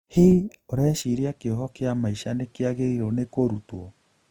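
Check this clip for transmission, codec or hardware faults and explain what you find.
Two faults are audible in this speech clip: a coding artefact that runs throughout, and a change of input device partway through.

Throughout, the speech has a rough, grainy texture. The most likely cause is Opus compression in its music (CELT) mode. That mode keeps each band's energy but fills bands that are short of bits with folded or noise-like content, so harmonics come out coarse and hissy rather than watery. Full bandwidth survives up to about 20.1 kHz, and the damage is plainly audible, which fits a low rate around 24 kbps. This graininess, with few spectral holes, is what separates it from the swirling, warbling artefacts of MP3.

From 1.02 s to the end, the input switched to a poorer device. The sound becomes duller because the new device passes nothing above about 11.4 kHz. The level drops by roughly 5 dB, and a new background noise floor appears about 40 dB below the speech. 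The change is instant, with no gap at the switch. This points to a change of hardware rather than a codec narrowing its bandwidth, because the level, tone and noise all shift at the same moment and then stay that way.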